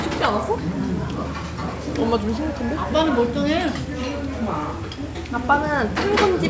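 No technical faults can be heard anywhere in this audio. It has come through a WebRTC call path, and nothing reaches above 8 kHz, which fits a wideband call codec such as G.722.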